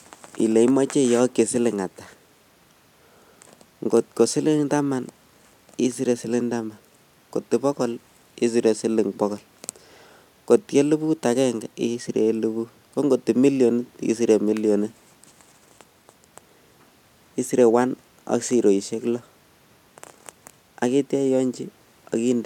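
No technical faults are audible.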